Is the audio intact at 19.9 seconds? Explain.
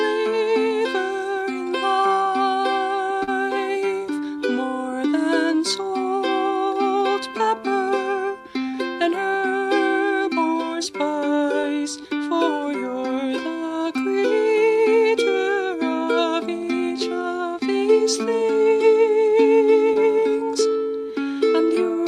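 No: short concealed packet loss at 19.93–19.97 s. About 20 ms never arrived, so the decoder extended the preceding sound, leaving a brief smear or wobble.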